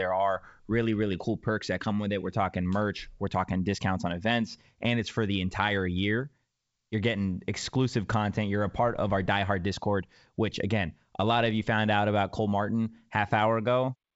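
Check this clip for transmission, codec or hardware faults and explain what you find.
No transmission, codec or hardware fault is present; the wideband coding tops out near 7.7 kHz with at most a faint upper-band hiss, and the level eases down in a smooth fade-out at the very end around 14 s with no click or hard edge.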